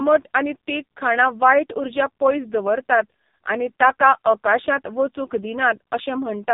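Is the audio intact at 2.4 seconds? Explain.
No. At 2.4 s the speech sounds buzzy and synthetic, with nothing above 3.8 kHz. That is the heavy AMR narrowband mobile codec damage throughout, whose few-pulse vocal-tract model at a low bitrate (about 5.15 kbps) strips the detail.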